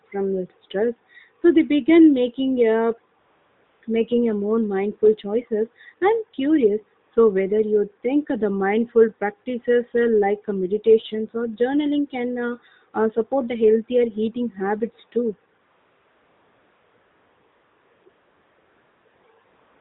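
AMR comfort noise fills pauses at 3.20–3.82, 7.06–7.12, 15.62–18.06, 18.10–19.06, 19.08–19.24 and 19.46 s to the end. No speech frames were sent, so the receiver generated smooth synthetic hiss in their place. On a spectrogram, flat featureless bands switch abruptly in and out.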